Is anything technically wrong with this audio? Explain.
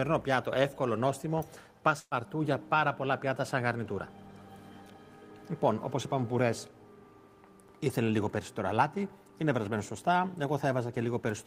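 Yes. At 1.99–2.14 s, a burst of packet loss: about 120 ms vanishes, masked by a fading continuation of prior sound rather than a clean dropout's abrupt silence.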